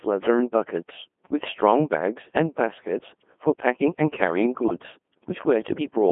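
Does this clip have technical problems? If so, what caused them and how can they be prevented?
Yes. The whole clip goes through a Codec 2 vocoder, whose robotic, buzzy synthesis fits a 2.4 kbit/s mode. On a spectrogram, smeared harmonic stripes sit within 200 Hz to 3.4 kHz. The waveform is rebuilt from sine waves rather than preserved. Prevent this with a higher-rate waveform codec.

From 4.62 to 4.84 s, bit errors on digital voice radio, at a rate of a few percent, corrupt several frames. The result is warbling bleeps, seen as abrupt pitch, level and spectral jumps between frames. Prevent this with stronger signal coverage and error protection.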